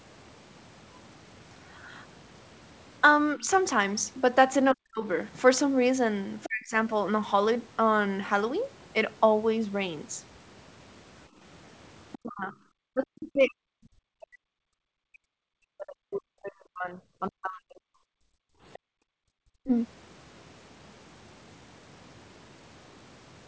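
At 3.37 to 3.47 s the speech dips by about 5 dB. This is speech suppressed in double talk, likely because the echo canceller mistook overlapping talk for echo. At 4.74 to 5.04 s and 6.45 to 6.77 s the same fault cuts much deeper, about 40 dB, and the speech briefly vanishes.

From 12.12 to 12.54 s the other side's voice is leaking through, about 20 dB below the talker. It is likely residual loudspeaker echo that the canceller missed. Starting at 12.17 s, speech is suppressed in double talk for about five seconds, until 17.88 s. The speech keeps dropping away by up to about 40 dB.

From 18.16 to 19.26 s the background is gated by the echo canceller. The room sound falls by about 39 dB for roughly a second, then returns. Inside that gap, at 18.73 to 18.79 s, a short scrap of the other side leaks through, about 25 dB down. This is likely more uncancelled echo.

At 19.54 to 19.70 s speech is suppressed in double talk once more, dropping about 40 dB. 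The likely cause is again the canceller clamping the microphone while both sides spoke.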